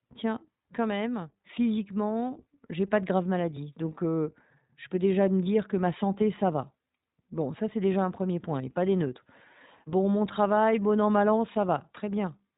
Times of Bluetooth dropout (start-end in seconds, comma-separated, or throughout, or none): none